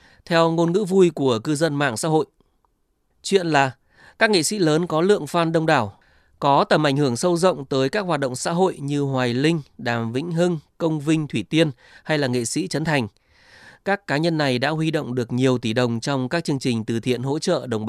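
No technical faults are audible.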